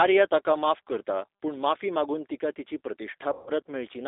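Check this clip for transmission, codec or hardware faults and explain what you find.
Two faults are present: the whole clip has passed through a G.729 speech codec, and one stretch near the end shows concealed VoIP packet loss.

G.729 codec damage runs throughout. The speech is confined to roughly 300 Hz to 3.7 kHz, with nothing above that line band. The codec rebuilds speech from a vocal tract filter, a pitch predictor and a few coded pulses per 10 ms frame, which fits an 8 kbit/s G.729A stream. That resynthesis is plainly audible as a rough, slightly synthetic quality on the voice.

VoIP packet loss concealed by the speech codec occurs from 3.33 s to 3.50 s. About 140 ms of audio went missing, which fits roughly seven lost packets. Rather than dropping to silence, the decoder carried its last pitch and filter settings forward and lowered the level frame by frame. The result is stretched into a buzzy tone or coloured noise that fades across the gap. 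Because each frame is predicted from the previous one, the speech stays weak or distorted for a short while after real packets resume.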